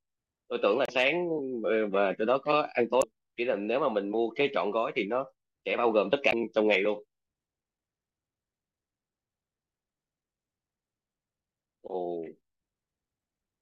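Damaged data in a compressed stream interrupts this speech clip three times: at 0.85 to 0.90 s, 3.01 to 3.04 s and 6.31 to 6.34 s, each a brief chirp or blip lasting roughly 26 to 42 ms. Bytes in the encoded file were lost or corrupted at those points, so the decoder misread the affected frames, lost its place in the bitstream and emitted garbled output until it locked onto the next valid frame header.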